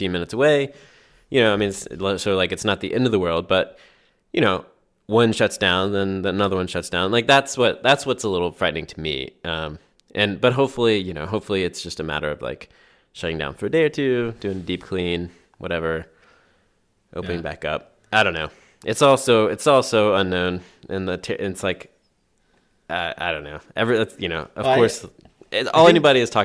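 Nothing in this speech recording points to a technical fault; there's no problem here worth flagging.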